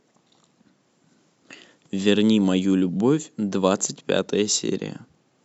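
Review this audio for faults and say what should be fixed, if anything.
Nothing needs fixing: the speech signal shows no technical faults anywhere in the recording.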